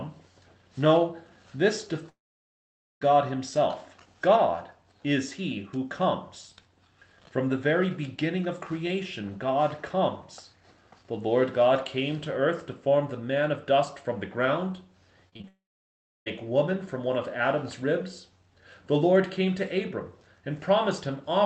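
At 2.09 s the sound stops for about 0.92 s, a long network dropout that is likely the cause. The last sound is stretched into a brief fading buzz, then roughly 0.86 s of silence follows before audio resumes with that stretch missing. What separates this from ordinary packet loss is the single long hole. The fill dies out quickly and gives way to plain silence rather than continuous patching.

From 15.29 s to 15.45 s comes repeated packet loss, heard as a brief robotic chop. Four short gaps, the longest 30 ms, are each patched by continuing the preceding sound, and about half of this short span is concealed. Unlike a dropout, there is no long silence. It stutters and warbles with small pieces missing.

Immediately after, at 15.48 s, a second long network dropout, likely the cause, removes about 0.78 s through 16.28 s. A short fading fill is followed by about 0.68 s of silence. All of this passes through a call path whose band stops at 8 kHz, consistent with Opus at around 24 kbps.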